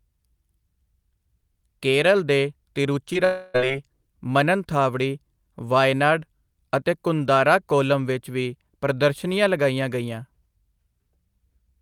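At 3.13 to 3.17 s there is a short concealed packet loss. About 20 ms of speech arrived too late to be decoded. The receiver covered the hole by extending the preceding sound, then blended back. It comes across as a brief smear or wobble.

From 3.25 to 3.56 s the speech turns into a stretched, synthetic continuation of the last sound that fades and never falls fully silent. This is likely a long network dropout. Roughly 300 ms were lost, almost all of it papered over, and the speech resumes without the missing part.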